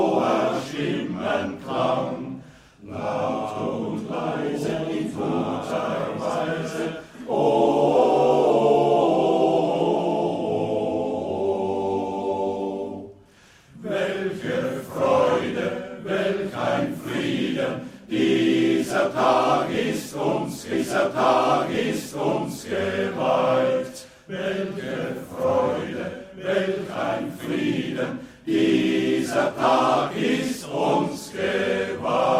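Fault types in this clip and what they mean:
Stream segment repeated: at 20.73 s the player jumps back and replays two seconds of the programme, running to 22.73 s, because the same segment was fetched or queued twice; a small blip marks the jump, and the clip runs two seconds longer.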